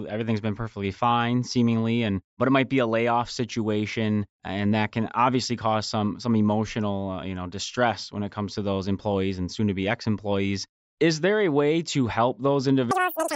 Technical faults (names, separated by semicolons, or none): wrong sample rate